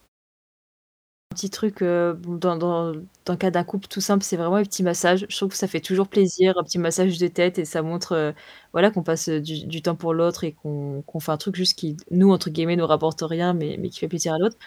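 At 0.66 s, after a 0.66 s pause, there is a clipped start after the pause. The output device is still waking, so the sound from 0.66 to 1.32 s is swallowed and "petit truc heu b" bursts in abruptly. On the waveform, the flat silence jumps straight into speech with no rising onset.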